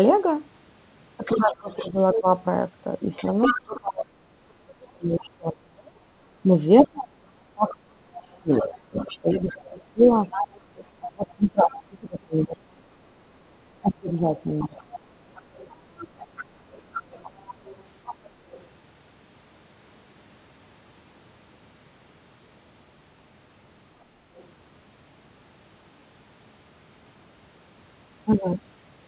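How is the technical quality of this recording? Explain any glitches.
The recording has clear call-echo problems. The speech is band-limited with nothing above 4 kHz, which fits a narrowband telephone codec such as G.711.

Other side's voice leaking through: A second voice is heard at 1.25–2.21 s, 3.16–3.79 s, 7.68–11.76 s, 14.59–18.66 s and briefly at 24.38–24.45 s. Its level runs from about 5 dB below the speech down to about 35 dB below. Likely the echo canceller left loudspeaker sound in the microphone signal.

Speech suppressed in double talk: The main voice dips at 1.32–2.27 s by around 15 dB. It dips again over 3.51–14.75 s, at worst by around 35 dB and for roughly seven seconds in total. Both sides were talking here. The canceller likely couldn't separate them, so it turned everything down.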